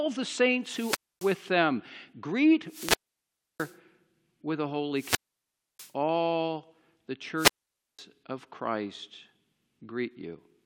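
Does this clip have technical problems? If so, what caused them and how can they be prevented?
Yes. The speech has four wireless microphone squelch dropouts, at 0.61 to 1.49 s, 2.66 to 3.77 s, 4.91 to 5.93 s (just after "with a") and 7.35 to 8.01 s. In each, the FM signal weakens, hiss swells, and the receiver's squelch cuts the output for about 0.26, 0.66, 0.65 and 0.51 s before the signal returns. That rising static before each hole separates it from a digital packet dropout, which cuts out abruptly and cleanly. Keeping the transmitter within clear line of sight of the receiver, with diversity antennas and a fresh battery, prevents it.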